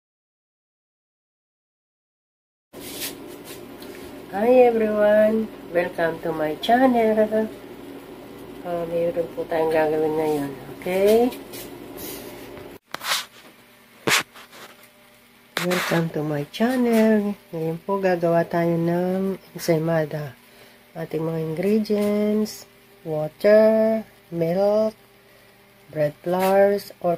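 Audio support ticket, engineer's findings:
No audible faults found; nothing to escalate.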